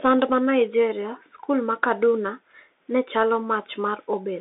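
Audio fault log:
Throughout: Bluetooth CVSD headset codec. The speech sounds boxed-in and thin, confined to roughly a 300 Hz to 3.6 kHz telephone band with nothing above 3.8 kHz, and the damage is plainly audible. S sounds come through scratchy, loud bright moments distort, and a granular hiss sits beneath everything. The pattern points to the 64 kbps one-bit-per-sample CVSD headset link, whose adaptive up-down step cannot track fast, loud high content and leaves grainy quantising noise.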